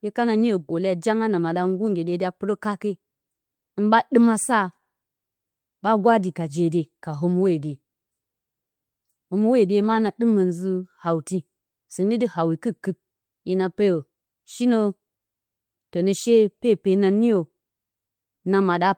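A speech recording with no audible technical faults anywhere in the signal.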